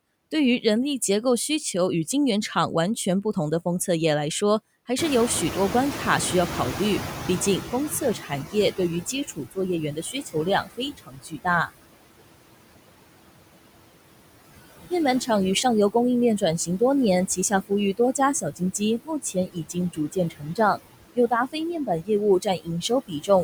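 Noise suppressor artifacts run through the whole clip. The suppressor pulls down every band it judges to be steady noise by about 21 dB, frame by frame, so the background drops away in the gaps and swells back under the speech. That pumping, tied to the speech, is what separates it from a constant noise floor or a simple gate.

From 4.98 s to 8.95 s the noise suppressor is catching up. The room noise, which is genuine background and not a system fault, jumps by about 21 dB at roughly 5 s. The suppressor's noise estimate lags, so the louder background at first comes through with only about 14 dB of reduction, then sinks over about 4 s as the estimate adapts. A gradual fade like this, following a sudden rise, marks adaptation lag rather than a level or gain change.

Four passages show speech cut by the noise suppressor: 8.2–9.58 s (about 15 dB deepest drop), 9.92–11.69 s (about 19 dB), 17.28–20.79 s (about 21 dB) and 21.15–23.29 s (about 20 dB). 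The suppressor mistakes soft parts of the speech for noise and turns them down with the background, for about a third of a second in the first passage, well under a second in the second and fourth, and about a second in the third. The cut parts sound swallowed or faint. Unlike a dropout, the sound thins rather than vanishing into silence.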